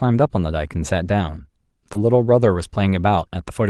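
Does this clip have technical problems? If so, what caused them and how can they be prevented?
Yes. Between 1.93 and 1.97 s there is a short concealed packet loss. About 20 ms of the call arrived too late or not at all, so the receiver extended the preceding sound from its own pitch or noise shape and then crossfaded back into the real signal. You hear a brief smear or wobble in the speech, where the sound blurs for an instant rather than breaking off. Reducing network jitter and congestion, or allowing a slightly deeper jitter buffer, would prevent it.

Overlapping the end of that stretch, from 1.95 to 1.97 s, is a lost packet rebuilt from error correction. One packet went missing, but the next packet carried a low-bitrate backup copy, which the Opus decoder played in its place, so that 20 ms has no gap. The cost is a moment of rougher, noisier texture just before normal coding resumes. 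Enabling in-band error correction with enough bitrate headroom and fixing the underlying packet loss would prevent it.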